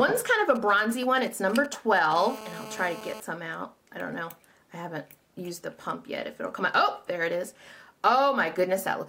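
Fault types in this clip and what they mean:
GSM signalling bursts: From 0.55 to 2.13 s, a galloping dit-dit-dit of short buzzes sits roughly 15 dB under the sound. A 2G handset close to the recording chain is sending brief clusters of radio bursts while it signals to the network. The audio circuitry rectifies each burst into a click, so every cluster comes through as a stuttering group of 217 Hz buzz fragments rather than a continuous tone.
GSM phone buzz: From 2.16 to 3.20 s, a hard, raspy buzz at 217 Hz, rich in harmonics and unrelated to the audio, runs steadily at about 15 dB below the signal. It follows directly from the signalling bursts, as the handset moves to continuous transmission at 217 bursts per second, which fits a phone in an active call. The audio circuitry demodulates that unbroken pulse train into the buzz.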